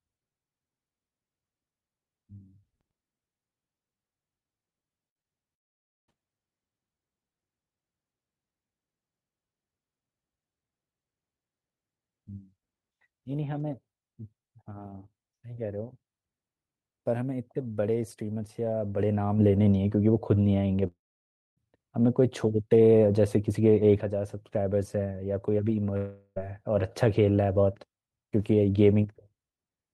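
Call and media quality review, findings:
Repeated packet loss (robotic sound), 5.09–5.28 s: choppy stretch with four short holes, longest about 53 ms, together about 100 ms of sound gone and nearly half the span patched. Jitter buffer/PLC extending the last frame into each gap. Unlike a dropout, the holes are short and the sound keeps resuming between them.

Long network dropout, 5.54–6.10 s: about 0.54 s missing; concealment fades quickly into near-silence for about 0.53 s, then audio resumes past the lost part.

Long network dropout, 20.87–21.59 s: about 0.7 s missing, about 0.6 s of it silent.

Long network dropout, 25.97–26.39 s: about 0.4 s missing with no silent gap. Continuous concealment bridges the gap, and there is a slight timing slip of about 10 ms.

All three: likely transport-level outage with receiver concealment. Unlike the robotic stretch, each is one long unbroken gap rather than repeated brief holes.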